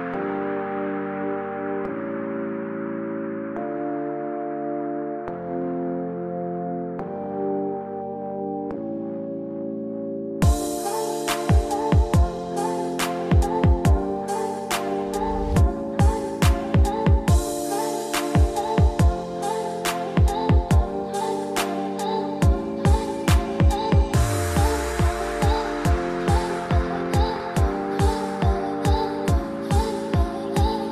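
From 26.36 to 27.41 s a train of clicks sits over the sound: around fifteen sharp, similar pops at about 15.5 per second, unevenly spaced, peaking a few decibels above the programme. The likely source is interference from nearby equipment or a faulty connection or power supply.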